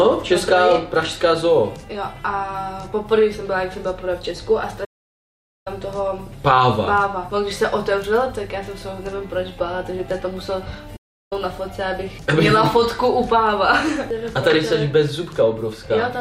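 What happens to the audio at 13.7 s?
Nothing goes wrong at 13.7 s; the audio runs through that moment intact, with no dropout, click, distortion or other fault.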